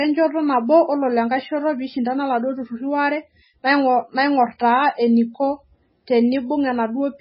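Very likely heavy MP3 compression, running through the whole clip, with the encoder so short of bits that it discards everything above 5.6 kHz, a cutoff that fits a bitrate near 16 kbps. The speech is dull and muffled, lacking its upper treble. Weak frequency lines drop in and out between frames, giving a watery, swirling texture, metallic chirps on s sounds, and softened, smeared consonant attacks.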